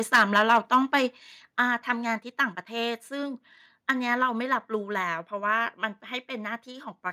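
A speech recording with microphone overload from 0.14 to 1.0 s, where peaks run about 9 dB past the converter's limit and a few percent of samples are flattened. It returns briefly from 3.89 to 3.91 s, about 2 dB over, with roughly 2 percent clipped. The likely cause is input volume set too high at the converter. Unlike a limiter, which rounds peaks off smoothly, this is a hard flat-topped crackle that appears only on the loudest syllables. The microphone volume stepped down at 0.16 s by about 3 dB and again at 1.17 s by about 5 dB. These are most likely the call software cutting the device input after detecting the overload. Voice and background drop together in a single instant jump, with no gradual fade or pumping. That instant step separates it from an automatic gain ramp, and the overload still continues past the first step.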